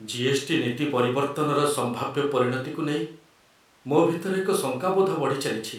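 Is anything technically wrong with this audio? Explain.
No, nothing technically wrong stood out on listening to this speech clip.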